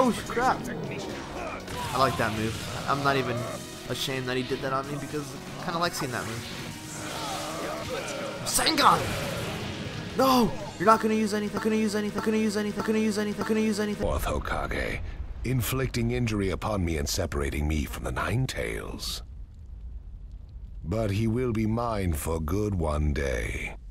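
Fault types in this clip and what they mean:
Broken-record loop: from 11.57 s to 14.03 s the audio locks onto one 0.61 s fragment and plays it four times back to back, so a short identical phrase cycles instead of moving forward. The likely cause is a player, encoder or stream that stalled and kept resending the last piece it held, so whatever belonged in those seconds is missing. On a waveform the fragment's envelope repeats exactly every 0.61 s; a spectrogram shows the same pattern tiled four times side by side.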